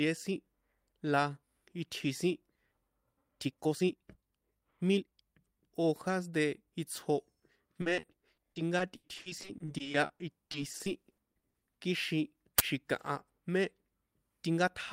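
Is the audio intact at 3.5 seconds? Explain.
No. From 3.20 to 5.14 s the speech runs through a time-stretched section at about 1.57 times normal pace, likely from software squeezing it by dropping short pieces. It sounds rushed, yet the pitch stays put, unlike a plain speed-up, which would raise it.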